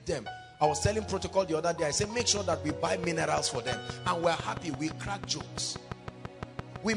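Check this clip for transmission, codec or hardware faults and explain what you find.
One fault is present: a train of clicks running from 2.04 s to 6.94 s. Sharp pulses of nearly identical shape arrive at a regular rate of about 5.9 per second, roughly thirty in all, with peaks standing something like 15 dB above the surrounding sound. The likely cause is periodic electrical interference or a faulty connection or power supply. It is heard as steady ticking laid over the sound and continuing through the pauses.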